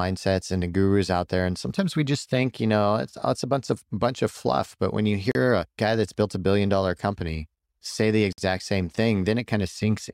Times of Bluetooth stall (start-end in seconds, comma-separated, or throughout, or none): 5.31-5.35, 8.33-8.38